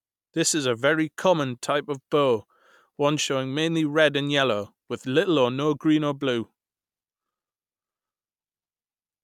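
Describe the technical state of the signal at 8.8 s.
At 8.8 s the signal is intact, with no fault audible at that moment.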